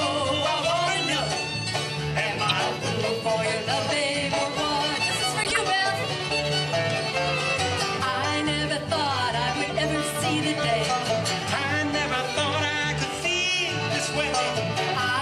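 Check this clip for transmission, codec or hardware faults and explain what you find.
Three short decoding faults are present, all of the same kind.

A corrupt frame was decoded at 2.48 to 2.52 s, 5.44 to 5.57 s and 13.57 s. Damaged compressed frames played anyway put energy at the wrong frequencies, heard as chirps or noise bursts peaking around -10 dBFS (the last one quieter). On a spectrogram they appear as brief, misplaced smears, and on the waveform as abrupt spikes.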